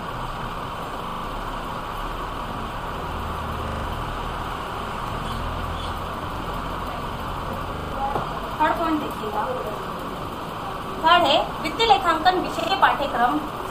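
Six spots in the audio have a repeated buffer, where the playback device ran dry and replayed its last chunk. Each one is a stutter with hard joins, and the repeat length fits a 40 ms buffer. There are four extra plays at 1.08–1.24 s, 3.68–3.84 s and 7.76–7.92 s, each losing around 150 ms. There's a single repeat at 5.08–5.12 s and 6.36–6.40 s, and two at 12.60–12.68 s.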